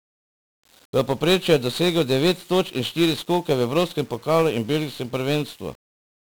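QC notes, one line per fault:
throughout: 1-bit DFPWM compression. Each sample is stored as a single bit that nudges an adaptive level up or down. The damage is heavy. Speech sounds fuzzy and crackly, with treble buried under broadband hiss. The rate fits a 48 kbps stream.
0.13–6.35 s: clock slip clicks. Faint regular ticks arrive about ten times a second, around seventy in all, forming a soft rattle under the speech. The likely cause is two unsynchronised clocks differing by around 200 ppm, each slip dropping or repeating one sample.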